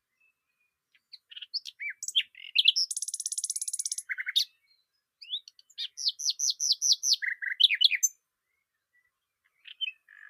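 Nothing here calls for comment, since these sounds come through without any technical fault worth pointing out.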